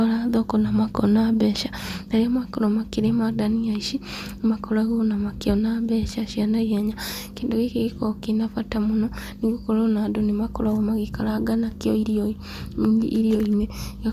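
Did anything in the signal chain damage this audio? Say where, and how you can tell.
No, nothing in the signal chain damaged this audio.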